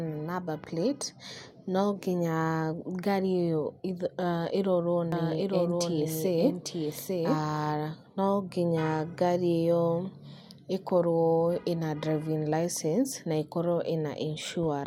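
From 5.12 s to 7.66 s the speech carries a doubled audio track: a second, full-band copy trails the original by about a second, roughly 5 dB quieter, with no reverberant tail or room colouring, and it cuts in and out abruptly. The likely cause is a slower second capture path or an edit leaving two offset copies. On a spectrogram the same harmonic patterns repeat about a second later, slightly fainter; the waveform shows overlapping envelopes with hard edges at both ends.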